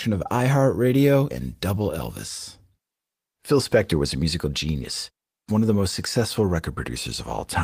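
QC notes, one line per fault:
No faults heard in this speech recording.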